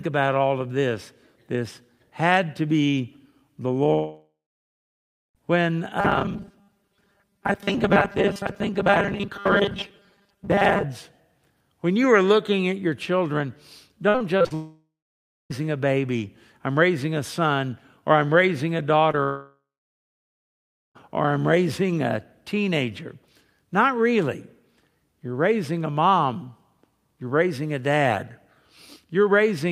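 At 3.93 s, right after "had to be the", the sound smears into a fading tail and then about a second of silence until 5.37 s. This is a long network dropout, likely from the connection stalling so that 1.4 s of audio never arrived.

From 6.00 to 10.85 s the speech takes on a rigid, metallic 200 Hz buzz. This robotic sound from repeated short buffers likely comes from a roughly 5 ms buffer being replayed to cover late audio, with about half the stretch being repeats.

Between 14.09 and 14.52 s the speech turns choppy and robotic. This is repeated packet loss: five gaps, the longest 53 ms, were each patched by extending the last sound.

Straight after, from 14.54 to 15.52 s, another long network dropout fades to about 0.6 s of silence before "a baby I'm raising". It likely reflects almost a second of audio lost in transit.

At 19.12 to 19.15 s a brief smear marks a short concealed packet loss, where about 20 ms went missing and the decoder bridged the hole.

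From 19.23 to 20.97 s a third long network dropout fades into about 1.3 s of silence before "or I'm raising a", likely another stall that dropped 1.7 s of audio.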